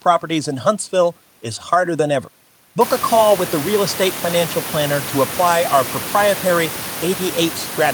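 No technical faults can be heard in the recording. The room noise around the microphone grows by about 25 dB at roughly three seconds in, and from then on it sits only about 13 dB below the speech.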